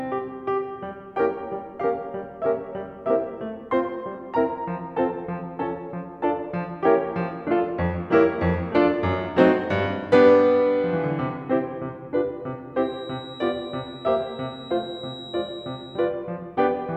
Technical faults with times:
12.72-16.14 feedback whistle

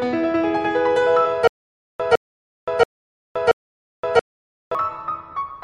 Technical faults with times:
1.47-4.75 stutter with silent gaps

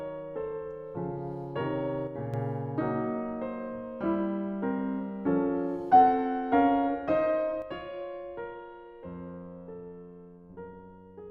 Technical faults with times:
2.07-2.34 one channel drops out
7.62-11.30 one channel drops out

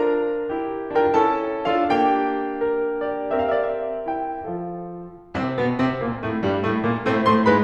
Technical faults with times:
none

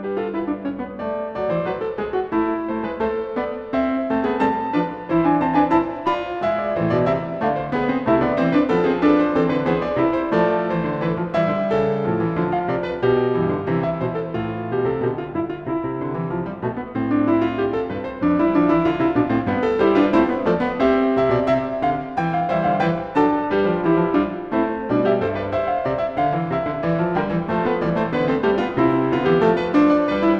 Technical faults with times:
0.00-30.40 periodic clock jitter

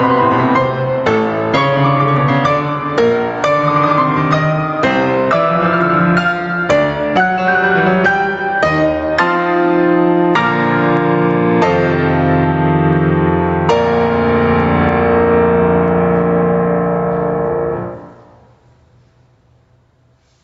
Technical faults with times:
0.00-20.43 gain pumping

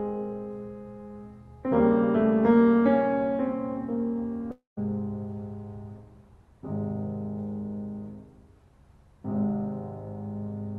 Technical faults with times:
4.51-4.79 long network dropout

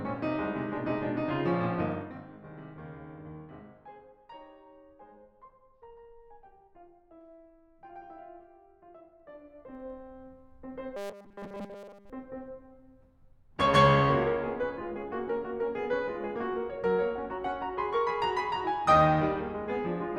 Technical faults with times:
1.81-2.28 zipper noise
9.17-9.91 zipper noise
10.96-12.10 robotic sound from repeated short buffers

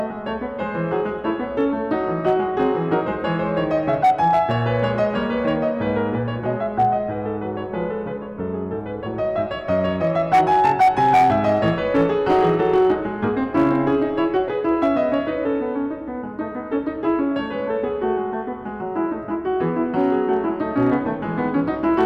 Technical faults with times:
0.00-22.06 hard clipping

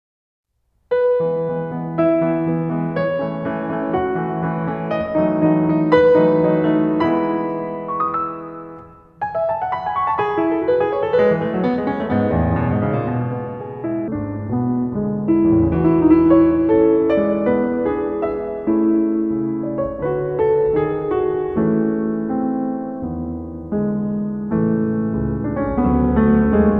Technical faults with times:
14.08-26.79 wrong sample rate

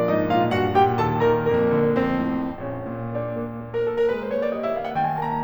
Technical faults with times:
1.54-5.43 periodic clock jitter

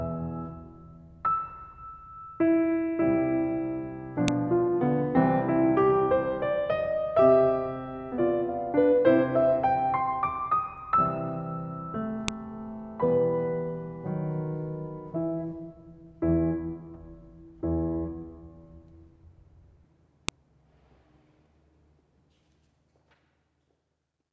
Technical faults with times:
4.28 file header played as audio
12.28 file header played as audio
20.28 file header played as audio

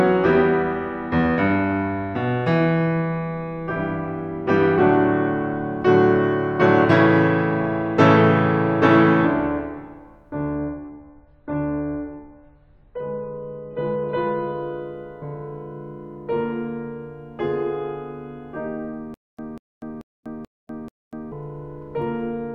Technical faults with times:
10.56-14.56 adaptive stream at a lower bitrate
19.14-21.32 stutter with silent gaps

